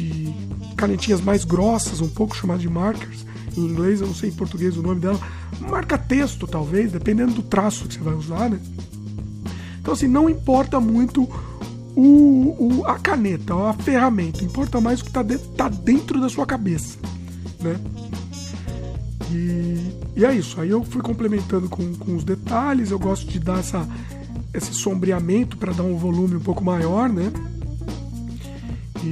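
No technical faults are audible.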